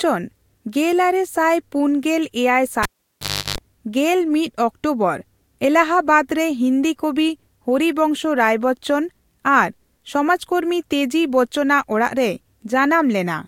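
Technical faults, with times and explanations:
2.83 to 3.58 s, cable pulled and plugged in: a pop cuts the speech off, leaving near silence for about 0.70 s, during which a 50 Hz mains buzz sounds for about 0.34 s before a second pop brings the speech back. A live cable was pulled out and pushed back in. Each pop is the sudden break or remaking of the connection. The buzz comes from the plug's tip touching the socket while its ground contact is still open, so it picks up mains hum.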